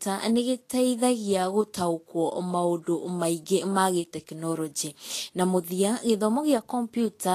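Heavy Vorbis compression, likely at a low quality setting, affects the speech from start to finish, with the damage plainly audible and a grain that fits a bitrate around 35 kbps. The encoder has quantised the upper spectrum so coarsely that fine detail is replaced by noise of similar energy, and nothing survives above 14.1 kHz. The result is a hissy, granular treble, roughened voiced tones and softened consonant attacks.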